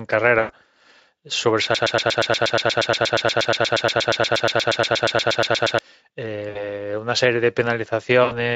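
At 0.39 to 0.51 s, 6.49 to 6.68 s and 8.23 to 8.33 s, VoIP packet loss concealed by the speech codec covers gaps of about 100, 60 and 80 ms. The decoder stretches the last sound into a fading, buzzy or noisy smear, and the speech stays weak for a moment after audio returns. That gradual decay sets it apart from a hard dropout. Underneath, the light Speex coding adds only slight roughness.

From 1.75 to 5.79 s a broken-record loop repeats one 119 ms fragment exactly, back to back, about 34 times. It likely comes from a stalled player or stream resending its last buffer. Unlike concealment, the loop neither fades nor changes, and the sound that should have played there is gone.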